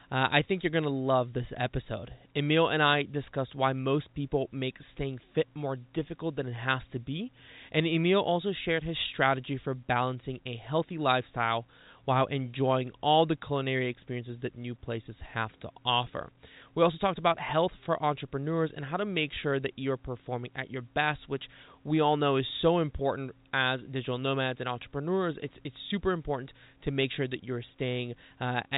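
No technical faults can be heard in this speech clip.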